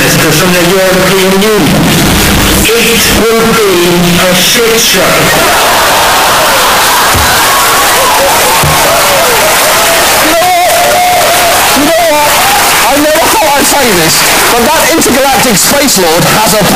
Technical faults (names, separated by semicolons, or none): float read as integer